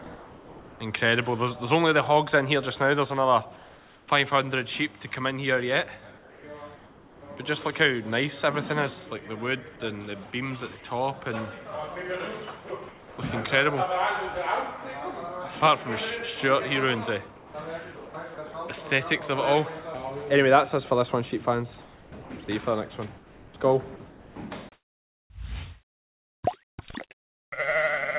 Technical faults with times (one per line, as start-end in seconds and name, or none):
0.04 sound dropped by the voice detector
0.04-0.80 comfort noise in place of the background
3.56-4.08 comfort noise in place of the background
6.18-7.22 comfort noise in place of the background
12.68 sound dropped by the voice detector
12.68-13.18 comfort noise in place of the background
17.36-18.54 sound chopped by the voice detector
21.82-25.30 sound chopped by the voice detector